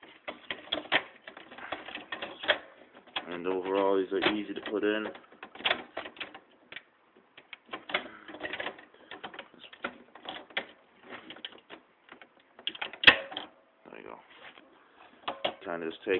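No technical faults are audible anywhere in the audio.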